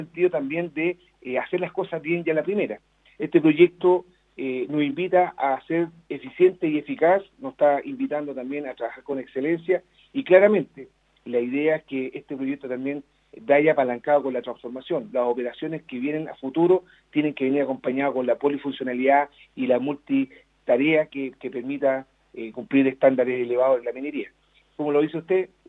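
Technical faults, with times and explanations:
Nothing stood out on listening to this clip.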